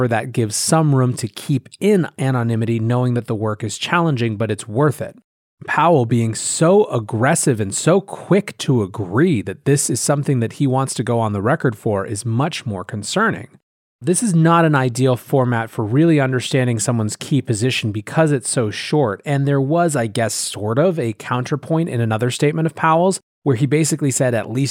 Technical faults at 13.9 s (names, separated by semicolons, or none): sample clock jitter